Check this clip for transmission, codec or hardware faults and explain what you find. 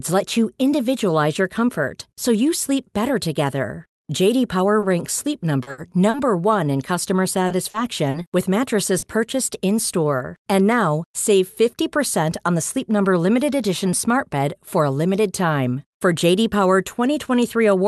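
Two kinds of transmission fault affect this speech, both from a packet-based call link. The audio's content tops out near 12 kHz, as expected of the Opus call codec.

Repeated packet loss (robotic sound) occurs from 4.79 to 6.17 s (four gaps, longest 70 ms) and from 7.47 to 9.06 s (five gaps, longest 40 ms). Concealment extends the last sound into each hole, producing choppy speech. On a spectrogram, harmonics smear flat across the gaps, and the waveform shows brief dips.

A jitter buffer speed-up runs from 11.61 to 12.80 s. The receiver trimmed short pitch-period pieces, about 50 ms in total, to shrink its backlog, so speech plays roughly 4% faster at unchanged pitch. The waveform keeps its cycle spacing, while spectrogram harmonics keep their frequencies.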